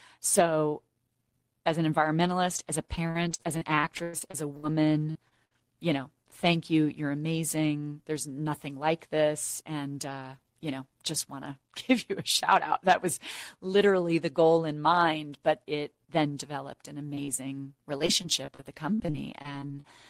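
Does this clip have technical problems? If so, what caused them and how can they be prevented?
Yes. There are three kinds of network fault.

Repeated packet loss (robotic sound): From 2.95 to 4.65 s, packets kept arriving late or not at all. The decoder patched over a dozen holes, the longest 100 ms, and filled about a quarter of that stretch. The result is choppy audio with pieces missing. The same happens more lightly from 17.99 to 19.86 s, with gaps up to 41 ms. A steadier connection, or a larger adaptive jitter buffer with forward error correction, would prevent this.

Short concealed packet loss: Between 20 and 40 ms of audio failed to reach the decoder at 5.11 to 5.17 s, at 5.29 to 5.33 s (just before "you know thank you"), at 17.25 to 17.30 s, and at 17.36 to 17.41 s (just after "it then developed an"). Each hole was bridged by extending the preceding sound, which leaves a brief smear or wobble. 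Redundant encoding of recent frames would let the receiver rebuild these short losses.

Burst of packet loss: From 5.45 to 5.53 s, consecutive packets went missing, about 60 ms in all. The receiver stretched and faded the last sound, so there is a short held buzz or hiss and then a jump to "you know thank you". Prioritising voice traffic on the network would reduce such bursts.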